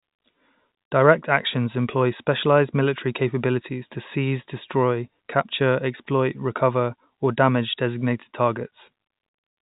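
No technical faults are present.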